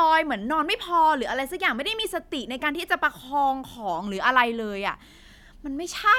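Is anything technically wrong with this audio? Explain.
No, the speech signal shows no technical faults that a listener can pick out.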